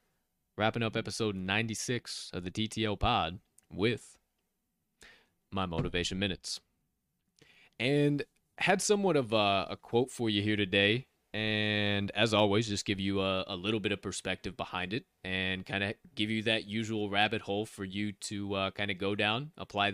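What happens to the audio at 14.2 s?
Nothing goes wrong at 14.2 s; the speech continues intact through that moment with no dropout, click, distortion or other audible fault.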